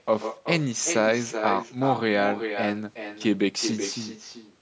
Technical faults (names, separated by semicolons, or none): echo with no canceller